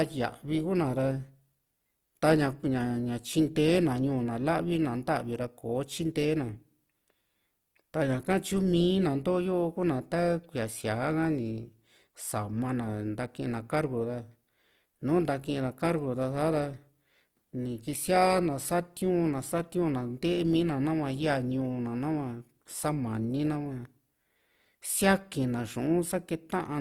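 Plainly audible damage from Opus compression runs through the whole speech clip, likely in its CELT music mode. Bands short of bits get filled with folded or noisy content, so tones sound rough and grainy. Bandwidth stays full to about 20.2 kHz, which fits roughly 24 kbps.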